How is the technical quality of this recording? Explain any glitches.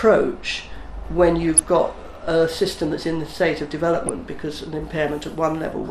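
The recording has plainly audible codec damage throughout and two short bursts of digital breakup.

MP2 compression runs through the whole clip, which likely comes from MPEG Layer II encoding at a low bitrate, around 80 kbps. With too few bits, upper sub-bands drop out and flicker while the remaining bands are coarsely quantised, giving a dull, gurgling, granular texture.

DAB burbling occurs at 1.42 to 1.64 s and 3.95 to 4.27 s, the second burst longer. Bit errors at a rate well under one percent slipped past error correction into the MP2 data. The corrupted values put brief blips of noise into individual sub-bands.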